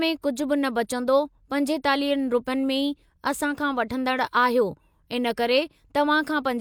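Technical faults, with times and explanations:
No technical faults can be heard anywhere in the speech. Nothing in the recording calls for a time or an explanation.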